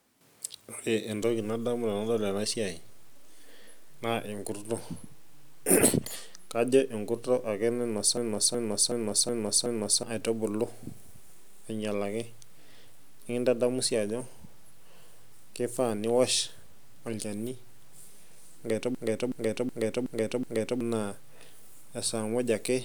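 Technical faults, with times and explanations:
8.17–10.03 s and 18.95–20.81 s, system hang loop: the speech stutters as one 0.37 s fragment repeats exactly five times, about 2.7 times per second. The system froze while the sound hardware kept replaying the same ring buffer, which fits a 16384-sample buffer. About two seconds of speech is lost each time.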